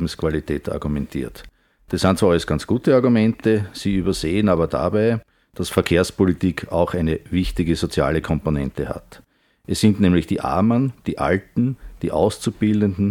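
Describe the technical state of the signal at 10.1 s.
The signal at 10.1 s is intact, with no fault to be heard at that point.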